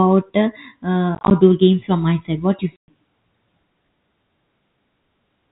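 Packet loss filled with silence chops this telephone-band speech clip twice. From 1.15 to 1.31 s, about 80 ms of sound drops out in short holes of at most 20 ms, scattered across 160 ms. From 2.76 to 2.88 s, right after "my side what you", a solid 120 ms gap opens. In both places the receiver substituted plain silence for the missing stretches, so the edges of each hole cut hard. The hole sizes fit packets about 10 ms long. The G.711 coding path, with its mu-law scale, 64 kbps rate and 4 kHz ceiling, adds no more than faint damage of its own.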